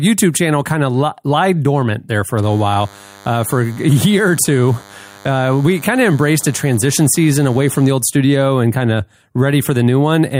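From 2.43 to 7.91 s, a DECT cordless phone buzz sits under the speech. Rectified radio bursts every 10 ms make a thin 100 Hz buzz.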